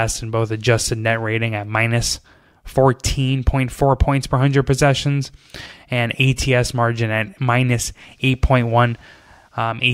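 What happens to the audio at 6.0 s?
Nothing goes wrong at 6.0 s; the speech carries on intact through that moment, with no dropout, click, distortion or other audible fault.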